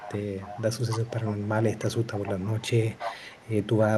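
A delayed copy of the speech trails the speech, an echo leak. It appears from 0.0 to 0.24 s, 0.42 to 0.62 s, 0.91 to 1.48 s, 1.71 to 2.68 s and 2.94 to 3.82 s. The copy lags by 277 ms. It sits roughly 15 dB under the speech, then rises to about 10 dB under in the last stretch. The likely cause is a far-end loudspeaker whose echo canceller let its own microphone pickup return down the line.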